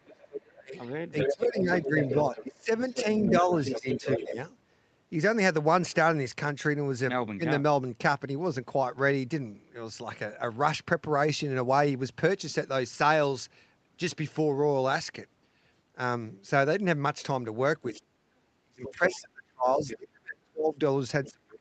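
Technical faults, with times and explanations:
0.0–0.73 s, speech suppressed in double talk: The speech dips sharply, by roughly 25 dB at its deepest, over about half a second. This is likely an echo canceller turning down the talker because it can't tell them apart from the far-end voice.
0.18–4.32 s, other side's voice leaking through: A second voice sits under the speech for about four seconds, only a few decibels quieter, within the roughly 8 kHz call bandwidth. Echo from the loudspeaker was likely left in the microphone signal.
1.28–4.37 s, speech suppressed in double talk: The level repeatedly sags by up to roughly 15 dB, adding up to about a second and a half, while the other voice is present. This is likely suppression triggered by both sides talking at once.
17.82 s to the end, speech suppressed in double talk: The speech is pushed down hard, by roughly 40 dB at its deepest. This is likely the echo canceller muting the near talker during overlapping speech.
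17.94–17.99 s, 18.84–19.18 s, 19.84–19.96 s and 21.25–21.31 s, other side's voice leaking through: Short scraps of the far-end voice slip through, between about 15 and 25 dB below the speech. This is likely residual echo escaping the canceller.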